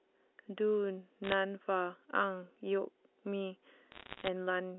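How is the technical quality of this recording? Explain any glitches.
There are two short bursts of bit errors on a digital phone line, at 1.24 to 1.34 s and again at 3.92 to 4.28 s. Bits got flipped in transit, and each one corrupts a single sample. When a high-order bit, or the sign of a loud sample, takes the hit, you get a sharp tick. The second burst is denser, roughly one bit in a hundred, so it comes across as a patch of crackle over the speech. The line band stops around 3.5 kHz, which fits ordinary G.711 A-law telephone coding.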